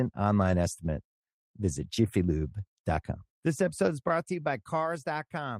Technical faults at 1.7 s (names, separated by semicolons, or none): none